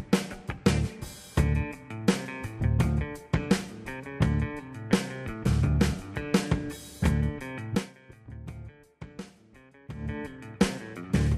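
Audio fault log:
No faults are audible anywhere in this clip.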